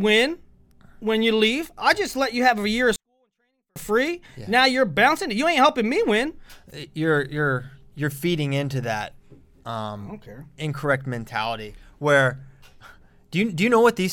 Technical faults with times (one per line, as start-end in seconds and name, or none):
2.96-3.76 24-bit alignment error (too quiet)